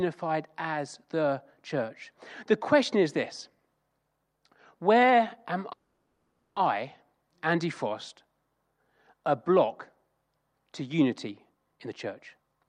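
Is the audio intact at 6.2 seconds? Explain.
No. Packets were likely held up in transit, emptying the jitter buffer, so a call audio freeze spans 5.72 to 6.57 s, just after "where am". The last sound stretches into a fading buzz or hiss for 840 ms, then speech resumes intact, 840 ms late.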